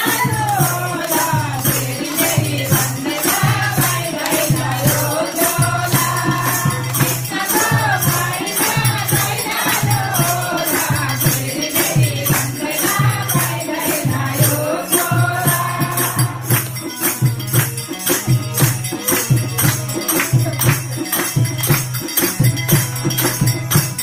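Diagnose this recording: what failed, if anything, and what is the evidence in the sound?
Nothing failed here as far as I can hear, since none of the stages from wiring to playback leaves a mark on this recording.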